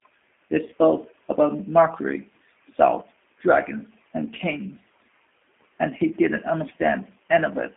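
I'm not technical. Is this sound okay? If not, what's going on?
No. The whole clip has been squeezed through a G.729 codec, a compression method built for internet phone calls. It doesn't store the sound itself. It stores a rough recipe for the speech and rebuilds it at the other end. That rebuilding is plainly audible here. The speech sounds slightly rough and synthetic from start to end. It is also thin, like a phone line, because only sound between about 250 Hz and 3.5 kHz gets through.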